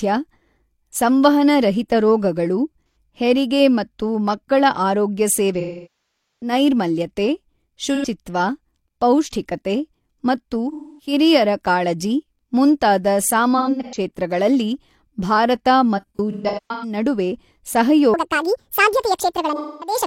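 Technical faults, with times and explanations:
2.87 to 19.96 s, AAC frame loss with concealment: the decoder loses packets and papers over the gaps by reusing the last good spectrum, so you get smeared, phasey patches instead of dropouts. Short ones sit at 2.87 s, 7.95 s and 19.55 s, the first two about 85 ms each, about two frames' worth. At 5.60 s, right after "ಹೆರಿಗೆ ಮತ್ತು ಮಕ್ಕಳ ಆರೋಗ್ಯ", roughly 0.77 s goes, long enough to decay toward silence and fade back. Between "ಪೌಷ್ಠಿಕತೆ ಮತ್ತು" and "ಕಾಳಜಿ ಮುಂತಾದ" at 10.72 s there's a quarter-second smear. Scattered losses follow at 13.57 s (after "ಕಾಳಜಿ ಮುಂತಾದ", runs up to about 100 ms) and 15.97 to 16.97 s (runs up to about 150 ms).
18.14 to 20.07 s, section at the wrong speed: the tail plays about 1.66 times too fast, so everything turns hurried and jumps close to ten semitones higher, pitch and tempo moving together. That's likely a stretch of audio stamped with the wrong clock rate somewhere in editing or playback.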